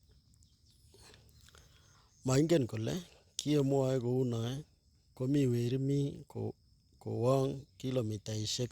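No technical faults can be heard anywhere in this speech recording. Nothing in the audio calls for a timestamp or a closer look.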